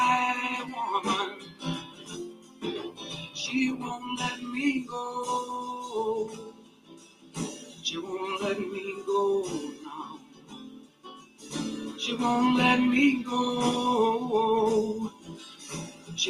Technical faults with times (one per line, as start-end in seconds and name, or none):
0.00-16.29 noise suppressor applied to music or sounds
1.30-2.64 sound cut by the noise suppressor
2.90-3.10 sound cut by the noise suppressor
6.28-7.84 sound cut by the noise suppressor
10.10-11.51 sound cut by the noise suppressor
15.10-16.11 sound cut by the noise suppressor